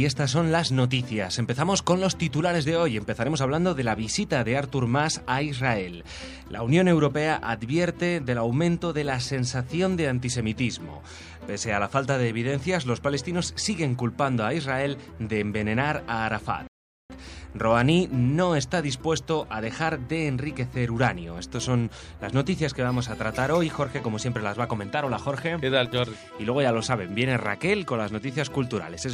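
Around 16.67 s the audio just drops into silence and sits there until about 17.10 s, then picks up exactly where it left off. That's a classic rebuffering stall: the player burned through its downloaded audio, had nothing left to play, and waited for more data to arrive. Nothing actually goes missing, but the pause adds roughly 0.42 s to the running time, so anything synced against it drifts by that much.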